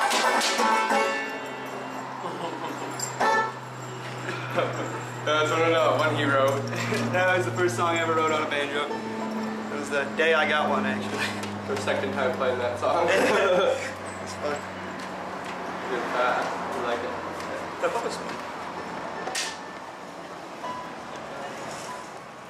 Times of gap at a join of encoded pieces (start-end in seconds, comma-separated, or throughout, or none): none